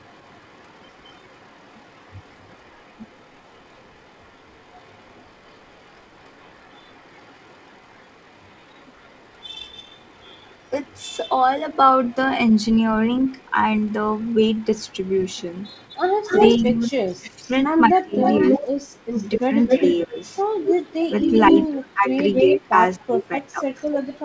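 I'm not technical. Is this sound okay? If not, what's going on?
No. Two call problems can be heard.

First, an echo leak. A delayed copy of the voice comes back about a quarter of a second late: barely audible from the start to 12.7 s, loud from 13.3 to 21.7 s, and fairly strong from 22.3 s to the end. It is likely that the other side's speaker is being picked up by their microphone. Unlike room reverberation, which blurs the sound, this is a separate repeat you can pick out.

Second, speech suppressed in double talk. Between 16.6 and 19.2 s, for about a second in total, the main voice nearly vanishes in pieces. It dips again briefly around 19.8 to 20.2 s, and for about a second and a half between 21.1 and 23.6 s. This is likely the echo-removal system muting both voices when two people talk at once. Unlike a network dropout, the dips happen only while the other voice is present.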